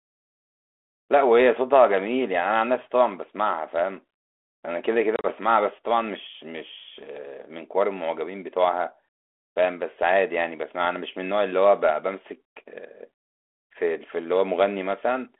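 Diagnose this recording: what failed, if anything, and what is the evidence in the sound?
The network stage failed: packet loss on an ADPCM call, over the G.726 link at 32 kbit/s with its 300 Hz to 3.4 kHz telephone band. Between 5.16 and 5.26 s, about 60 ms of speech drops out as several hard-edged silent gaps scattered across 80 ms, the longest about 30 ms. After the gaps, the speech comes back with brief, slight distortion. The losses knock the decoder's adaptive predictor and step size out of step with the sender's, and the sound settles once they resynchronise.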